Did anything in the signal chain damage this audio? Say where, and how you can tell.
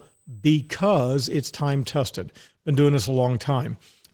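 Yes. At the codec stage, the speech throughout has the plainly audible damage of Opus voice compression: slightly hoarse, robotic voicing and a coarse, smeary top end. That fits hybrid mode at about 16 kbps, with linear prediction below 8 kHz and a thin transform layer above. A spectrogram would show blotchy, quantised detail above 8 kHz in 20 ms blocks.

In the analogue wiring or power path, a fixed USB whine at 8 kHz runs from 0.0 to 2.0 s, roughly 40 dB below the speech. The bus's 125 microsecond microframes draw current that leaks through ground or supply. On a spectrogram it appears as a thin, steady horizontal line ending abruptly at 2.0 s.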